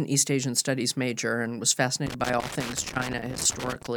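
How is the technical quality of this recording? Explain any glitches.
The quality is let down by one fault: loose connector crackle from 2.07 to 3.87 s. A worn or dirty contact in the signal path keeps making and breaking, chopping the speech, so those 1.8 seconds carry an irregular, scratchy burst of crackle.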